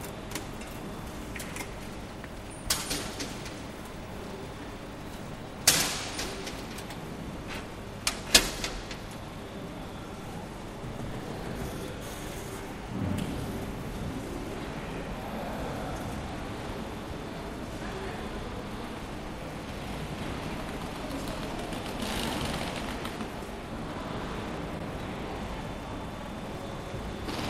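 At 24.78 s a 72 ms stretch of audio plays once more, then at 26.20 s a 48 ms stretch repeats twice, adding 96 ms. These are repeated frames: blocks of compressed data were delivered again, so the decoder replays the same slice, lengthening the audio and causing a short stutter. On a waveform the identical segments sit side by side. A spectrogram shows copied patches.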